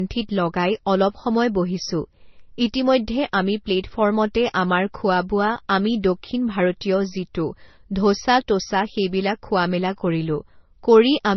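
From start to finish the speech has nothing above 6 kHz, leaving it dull and band-limited, and it carries two different layers of coding damage heard together. The mix points to transcoding between lossy codecs, likely a low-rate MP3 of roughly 27 kbit/s re-encoded to Vorbis at a similar rate. The second encoder spent its bits on the first one's artefacts and added its own, while the lowest cut-off in the chain stayed.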